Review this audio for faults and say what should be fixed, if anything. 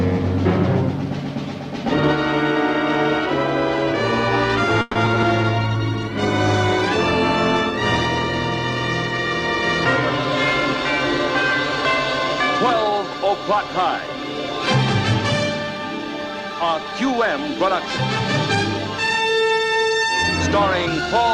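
Between 4.81 and 5.24 s there is repeated packet loss, heard as choppy, robotic sound. Four gaps fall in under half a second. The longest is 140 ms. Each gap is bridged by extending the last sound, about 170 ms in all, while about 60 ms is simply missing. Roughly 40% of that stretch is patched rather than real. Prevent it with a steadier network path and a larger jitter buffer.

From 5.61 to 11.79 s a call bitrate drop follows. The encoder was pushed from 64 kbps down to 24 kbps. The lowest rate holds for about 3.1 s. At that rate Opus codes coarsely and trims the top end. So the sound turns rough and watery, and duller than before. It stays that way until the rate climbs back. Prevent it by keeping more bandwidth headroom so the estimate doesn't collapse.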